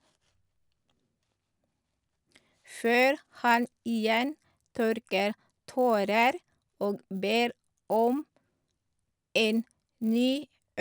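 A steady 100 Hz buzz rides under the speech throughout, because the resampler restarted on every block, converting each 10 ms block from 24 kHz to 48 kHz without its neighbours.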